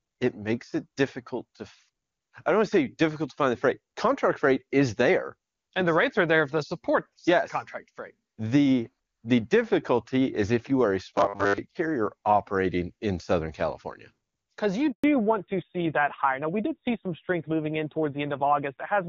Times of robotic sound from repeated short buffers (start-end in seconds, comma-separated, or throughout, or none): 11.18-11.58